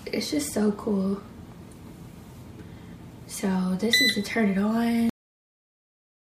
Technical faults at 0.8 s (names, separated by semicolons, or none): none